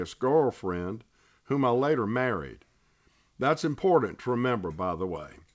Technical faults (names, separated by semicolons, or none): none